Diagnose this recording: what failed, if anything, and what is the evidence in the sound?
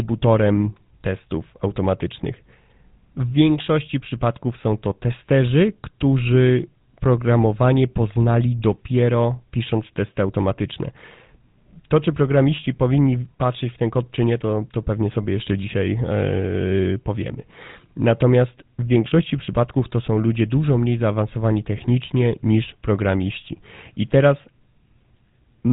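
The failure is at the codec stage: the speech went through the GSM full-rate codec for the whole clip. That coder models the vocal tract and drives it with a sparse, regularly spaced pulse excitation, discarding most of the excitation detail, which fits its 13 kbps rate. The result is a plainly audible buzzy, gravelly roughness on the voice throughout, and the band stops sharply, with nothing above 3.8 kHz.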